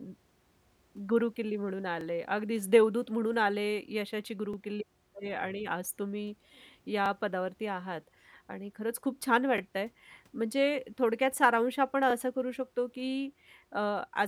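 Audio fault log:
2.01–2.04, 4.54–4.56, 7.06–7.08, 9.58–9.60, 12.10–12.13 s: overlapping chunks. Regular brief stutters occur where each 2.5 s chunk starts early, replaying about 23 ms of speech at the join.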